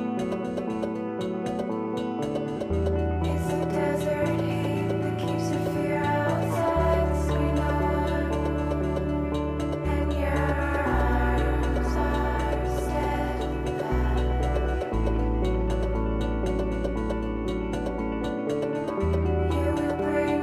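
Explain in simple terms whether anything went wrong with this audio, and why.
Nothing went wrong with this audio. Listening through it, no moment stands out as a technical problem that would catch a listener's ear.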